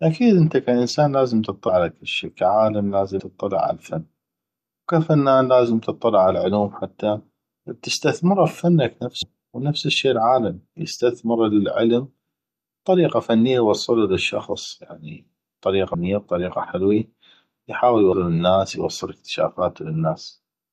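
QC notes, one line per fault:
1.68, 3.19, 9.22, 15.94 and 18.12 s: compressed frames skipped. Speech jumps ahead by roughly 0.1 to 0.3 s, consistent with whole 24 ms frames dropped.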